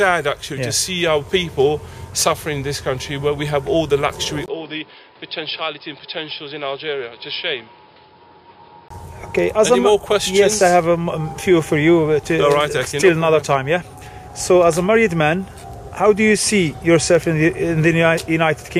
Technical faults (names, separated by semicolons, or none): input switched to a poorer device